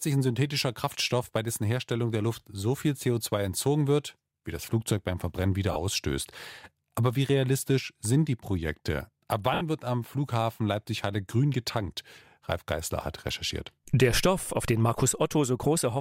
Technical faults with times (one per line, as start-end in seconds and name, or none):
5.72-5.76 lost LE Audio frames
9.54-9.61 lost LE Audio frames